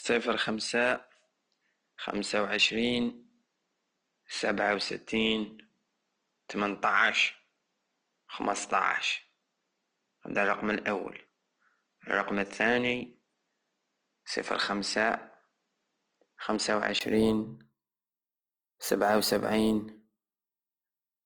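The input was likely switched from a poorer device to a better one partway through this speech clip. From 0.0 to 17.01 s the sound comes through a narrower path with nothing above 8.6 kHz, so it is duller and lacks air. At 17.01 s there is a 20 ms silence at the switch, after which the full bandwidth returns. The level stays about the same across the change, and the earlier device adds its own background noise at roughly 50 dB below the speech. Throughout the clip, the encoding is Opus compression in its music (CELT) mode, at a rate that fits about 24 kbps. The encoder keeps the energy in every band but fills starved bands with folded or noise-like content. Codec damage is plainly audible: tonal parts of the speech turn rough, grainy and noisy, even though the bandwidth stays full, reaching up to 20.3 kHz once the better input takes over.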